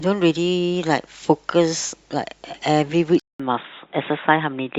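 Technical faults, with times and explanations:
3.20–4.79 s, input switched to a poorer device: after a 0.2 s flat-line gap, the speech turns dull, the spectrogram stops at 3.8 kHz, and faint background noise appears, likely from a device change.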